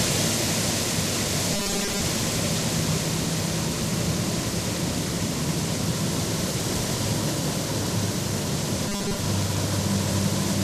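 From 1.53 to 2.02 s and again from 8.88 to 9.19 s, robotic sound from repeated short buffers turns the audio into a rigid 200 Hz buzz, likely from repeating a 5 ms chunk in place of most of the real signal. Unlike scattered dropout clicks, the buzz stays locked at one rate.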